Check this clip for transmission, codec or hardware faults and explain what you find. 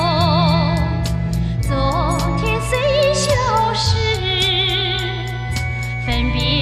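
One hardware fault is present: mains hum throughout. A ground loop or nearby transformer is coupling the 60 Hz power line into the signal path, laying a steady low tone with some low harmonics under the whole clip, only a few decibels below the audio itself.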